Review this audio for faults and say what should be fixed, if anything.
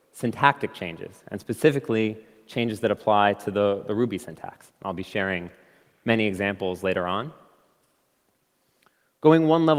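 Nothing stood out on listening, so there is nothing here that needs fixing.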